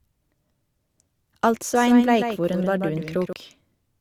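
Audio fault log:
Throughout: low-bitrate audio saved at a high bitrate. The speech carries the artefacts of a lean codec, and nothing reaches above 20.2 kHz. That likely comes from a roughly 48 kbit/s Opus-style encode re-saved as a generous MP3, which can't restore anything.
1.75–3.33 s: doubled audio track. A second, full-band copy of the speech trails about 150 ms behind at roughly 5 dB down, with no reverb tail or room colour, and it cuts in and out abruptly. That's likely a duplicate capture path or out-of-step edit.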